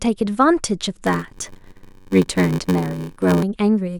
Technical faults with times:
1.06-3.43 block size mismatch (padded)

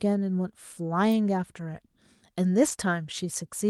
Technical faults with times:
2.67 lost packet rebuilt from error correction

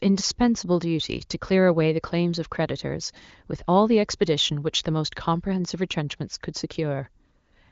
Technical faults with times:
none

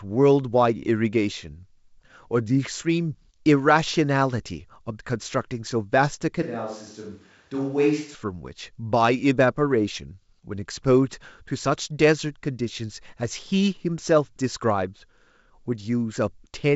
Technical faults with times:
6.42-8.15 switch to a distant microphone

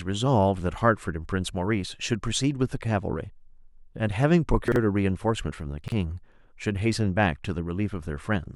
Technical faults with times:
4.68-4.76 chunks out of order
5.84-5.92 chunks out of order

